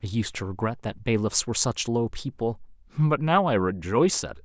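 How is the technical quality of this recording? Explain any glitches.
No technical glitches can be heard anywhere in this speech recording. There is nothing in it that needs explaining.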